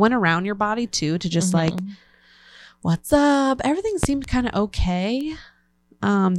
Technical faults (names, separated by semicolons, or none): loud pop; bit error spike